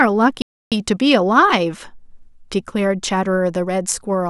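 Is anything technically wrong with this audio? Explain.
Yes. Bluetooth stall, 0.42 to 0.72 s: the speech cuts to about 0.3 s of silence, then resumes. The likely cause is radio interference delaying packets until the headphones' buffer emptied, leaving playback with nothing to play until the retransmitted audio arrived.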